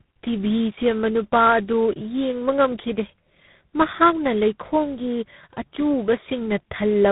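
Throughout, the speech passed through tandem speech coding: three speech codecs in a row, with each decoding and re-coding the last one's output. The roughness fits a GSM full-rate leg followed by two G.726 stages. Speech sounds rough, muffled and warbly, with nothing above 3.8 kHz.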